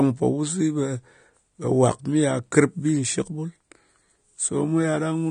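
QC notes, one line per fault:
Throughout: AAC compression. Nothing comes through above 9.7 kHz, so the speech sounds dull, with plainly audible smearing and fizz on sibilants. Likely an AAC-LC encode short on bits, which fits a 32 kbps stream, dropping the cut-off and thinning bands.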